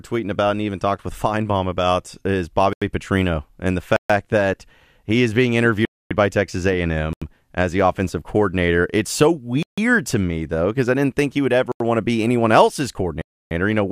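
At 2.73 s the speech drops into a block of digital silence lasting about 85 ms, and further dropouts follow at 3.96 s (133 ms), 5.85 s (256 ms), 7.13 s (85 ms), 9.63 s (149 ms), 11.72 s (85 ms) and 13.22 s (294 ms). Each gap is a block of digital silence, likely where the output buffer went unfilled in time. The repeated 85 ms length fits a 4096-sample buffer. The speech cuts out and back with no fade, and the longer gaps are heard as distinct holes.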